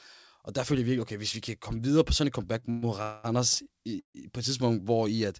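Right after "videre på sådan et", at 2.60 to 2.64 s, there's a short stall from a late packet: the last sound is held for 24 ms with a faint buzz or dip, with nothing lost. Then come three call audio freezes, at 2.70 to 2.84 s, 3.02 to 3.26 s and 4.00 to 4.16 s. The cause is likely packets held up in transit, which emptied the jitter buffer. Each one stretches the last sound into a fading buzz or hiss, and the last goes silent for 110 ms before resuming at "på et", with nothing skipped.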